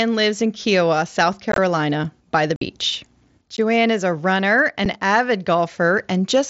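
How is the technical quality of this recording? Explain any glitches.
The recording is marred by four dropouts, heard over what sounds like an mSBC wideband headset link. Unconcealed Bluetooth headset packet loss at 1.52–1.58 s, 2.56–2.61 s after "by the", 3.57 s just before "is a runner", and 4.85 s after "is a runner": voice packets between headset and phone went missing and silence or an idle pattern replaced them. The speech drops into brief holes, up to about 50 ms, with abrupt edges, and the first one is broken and crackly.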